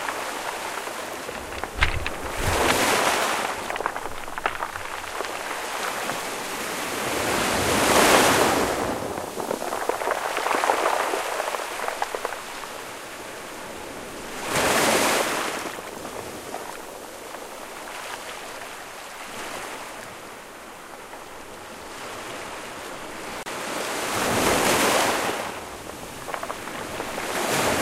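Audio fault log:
23.43–23.46 s, gap at a join of encoded pieces: a silence of about 30 ms cuts into continuous sound, with smeared edges. Encoder start delay and last-frame padding were left at a separately encoded join. The sound resumes exactly where it stopped rather than skipping ahead as a dropout would.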